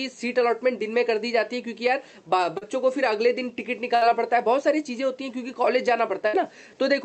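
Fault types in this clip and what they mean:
Short concealed packet loss: About 40 ms of audio around 2.57 to 2.63 s never arrived; the receiver extended the preceding sound and blended back in, leaving a brief smear or wobble rather than an audible fade, which separates it from the longer bursts.
Burst of packet loss: Around 3.95 to 4.03 s and 6.27 to 6.35 s, roughly 60 ms each went missing; the last sound was carried on and turned down into a held buzz or fading hiss, then the audio resumes further along, skipping the lost stretch.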